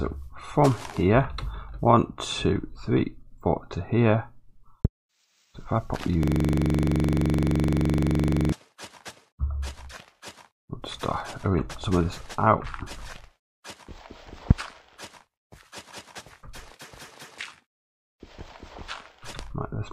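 At 4.85 to 4.87 s a sudden electrical transient, likely a plug, switch or static discharge, was added to the signal and produced a loud pop, a single sharp click sitting well above the audio, roughly 20 dB over it, while the sound continues underneath. Two more loud pops follow at 14.51 to 14.53 s and 19.39 to 19.42 s, also single and brief. The one at 14.51 s is the strongest, roughly 25 dB above the signal, and the one at 19.39 s is a little softer, around 15 dB.

Between those, from 6.23 to 8.52 s, there is a system hang loop. The computer or driver stalled while the audio hardware kept replaying the same buffer. A 42.67 ms slice, which fits a 2048-sample buffer, repeats exactly about fifty times at 23.4 Hz. The result is a rapid, rattling stutter, close to a low buzz, frozen on one fragment of sound for over two seconds before normal playback resumes.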